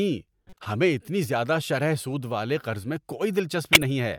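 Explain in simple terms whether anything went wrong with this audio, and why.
Two short bursts of garbled noise interrupt the speech. A faint chirpy blip runs from 0.47 to 0.66 s, just before "ہمیں اتنی زیادہ شرح", and a much louder squawk sounds from 3.73 to 3.83 s. Both are a corrupt frame decoded. A few of the small compressed chunks the audio is stored in got damaged, and the player decoded them anyway, putting sound at the wrong pitches for that brief moment.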